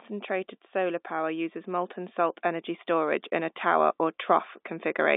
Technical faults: automatic gain rising

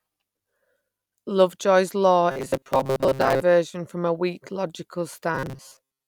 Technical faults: robotic sound from repeated short buffers

